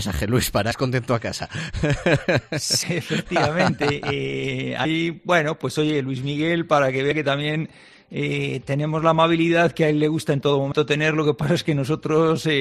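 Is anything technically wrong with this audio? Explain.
Yes. At 0.70, 2.82, 4.84, 7.10 and 10.71 s, damaged data in the compressed stream knocks the decoder out of frame sync, and each time a short chirp or blip is heard.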